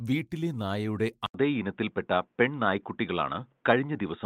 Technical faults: input switched to a poorer device

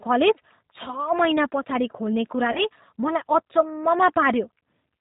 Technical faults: G.729 codec; VoIP packet loss concealed by the speech codec

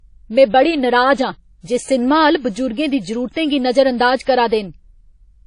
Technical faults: WMA compression; pre-echo

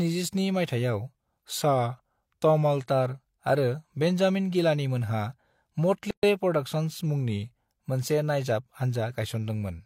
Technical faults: drift correction step; gap at a join of encoded pieces

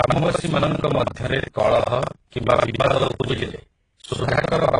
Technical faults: buffer tearing; transcoding between lossy codecs

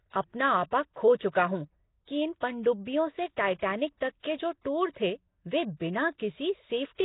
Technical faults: Nellymoser compression; pre-echo

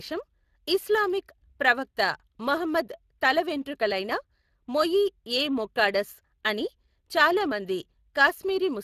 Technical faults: Speex codec

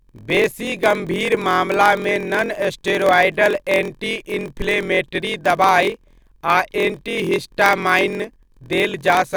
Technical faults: block size mismatch (padded)

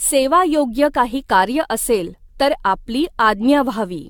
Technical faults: generation loss

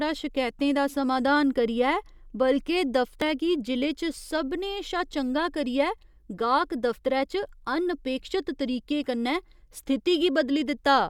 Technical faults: damaged data in a compressed stream

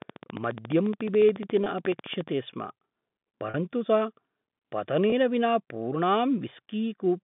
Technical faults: train of clicks; packet loss with pitch repetition

